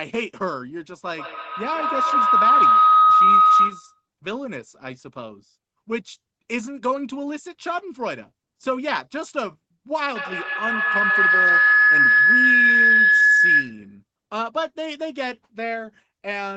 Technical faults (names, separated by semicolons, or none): feedback howl